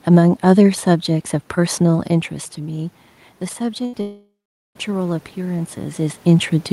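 Automatic gain rising runs from 3.58 to 6.27 s in this speech recording. The input level falls by about 11 dB, and the gain control responds by slowly adding about 4 dB over more than two seconds. The voice and the room noise behind it swell up together, which distinguishes this from the natural level shifts of the talker moving around 2 s and 6 s. A burst of packet loss hits at 3.85 to 3.95 s, and about 80 ms of audio never arrives. The receiver covers the gap by extending the last sound for about 77 ms and fading it down, so a voiced sound becomes a brief held buzz and other sounds a dying hiss. The speech then resumes slightly further on, with that short section missing. A long network dropout is the likely cause of the break from 4.01 to 4.77 s, where about 740 ms of audio is lost. The last sound is stretched into a fading buzz or hiss, and for roughly the final 430 ms there is only silence before the speech returns, with that stretch skipped entirely.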